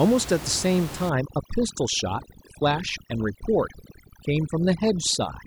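A speech recording with overdone noise removal from 1.09 s to the end. A noise reducer set far too hard pulls individual frequency bands down or out whenever they sit near its noise estimate, taking quieter parts of the voice with them. The background drops and breaks up into twinkling specks. Its telltale difference from a simple noise gate is this band-by-band sparkle, where a gate would leave room noise, about 13 dB below the speech, audible whenever it opens.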